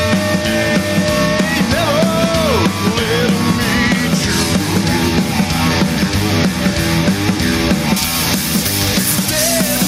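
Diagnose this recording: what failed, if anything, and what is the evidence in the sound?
Gain pumping runs through the whole recording. The gain swings by around 10 dB, squashing the dynamics. The likely cause is input gain set far too high, with a fast limiter in the processing stage clamping every peak.

Pre-emphasis left on appears from 7.96 s to 9.87 s. The treble jumps about 13 dB at 10 kHz relative to 1 kHz, making the sound thin, bright and sibilant. The curve matches 75 µs FM pre-emphasis with no de-emphasis applied downstream.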